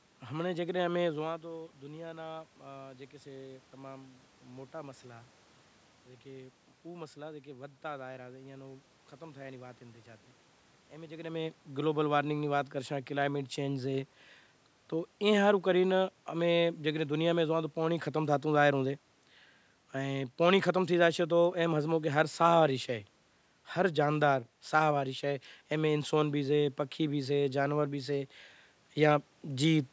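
No technical fault can be heard anywhere in this speech recording. The level shifts around 1 s and again around 11 s as the talker moves relative to the microphone, room noise sits in the background, and the call's microphone processing trims the lowest bass and leaves nothing above 8 kHz.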